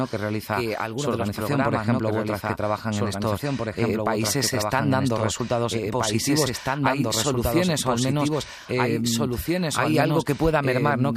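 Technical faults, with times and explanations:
Throughout, doubled audio track: a slower second capture path likely mixes in another copy, so speech repeats about two seconds later, equally loud and dry.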